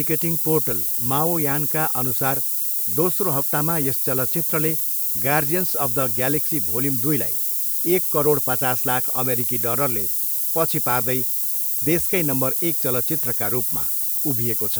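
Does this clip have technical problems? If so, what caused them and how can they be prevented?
Yes. Low bit depth with noise shaping runs through the whole speech clip. The signal is quantised to only 4 bits, and the rounding error is fed back so that the noise is pushed upward in frequency. The result is a constant, thin hiss nearly as loud as the speech, rising steeply toward the top of the band. A spectrogram shows a dense noise floor that brightens toward the highest frequencies from start to end, and the waveform looks coarsely stepped with a thick, fuzzy floor in the pauses. To prevent it, keep recording and export at 16 or 24 bits and reduce word length only once, at final delivery.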